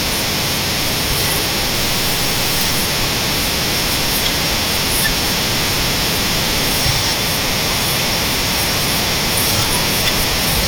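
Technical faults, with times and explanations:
1.74–2.82 s, stuck bit: harsh, buzzy distortion and noise at about -20 dBFS, likely from one data bit held fixed; unlike clipping, even the pauses buzz.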